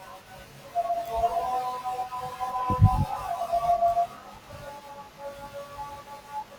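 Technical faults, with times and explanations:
Throughout, channel delay (comb filtering): one channel arrives roughly 20 ms behind the other, and when the two are summed to mono, the parts of the speech common to both cancel at evenly spaced frequencies. The first notch falls around 30 Hz, and further notches repeat about every 50 Hz up the spectrum. With a delay this long, the speech sounds rough or slightly doubled.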